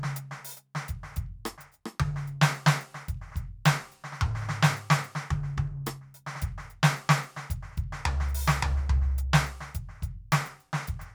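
No faults to report on this music clip; nothing in it calls for a note.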